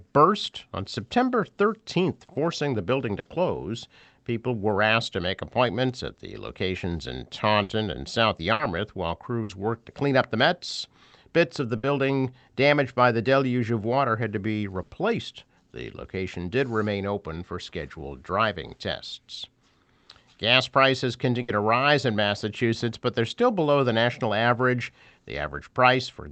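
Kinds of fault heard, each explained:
Burst of packet loss: at 3.19, 7.63, 8.53, 9.43, 11.77, 14.82 and 21.42 s, lost packets make the last sound stretch and fade for 60 ms, then 60 ms of speech is skipped.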